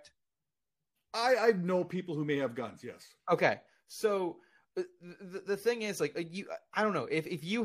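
Frames out of order, 0.28 to 0.65 s: two adjacent blocks of about 186 ms each were decoded in swapped order, which fits runs of four frames traded with each other. The speech in this stretch plays with its two halves exchanged, producing a brief garbled flutter. No time goes missing, and normal order resumes just before "I I know people".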